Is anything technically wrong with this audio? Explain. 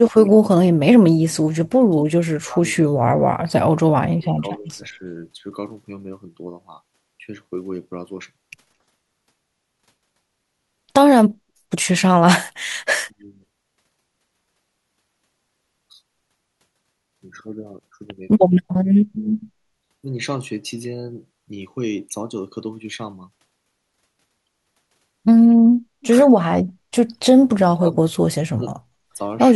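Yes. The speech repeatedly dips and breaks up, most likely speech suppressed in double talk. It happens at 0.17–0.8 s, 1.83–2.6 s, 2.92–3.53 s, 3.89–5.1 s, 13.07–13.32 s, 18.5–18.63 s, 27.14–27.23 s and 27.75–28.76 s. An echo canceller seems to mistake this talker for returning loudspeaker echo while the far side is also talking, so it pulls the level down. The drops reach roughly 25 to 40 dB. The voice sinks or cuts out in pieces, worst in the early seconds.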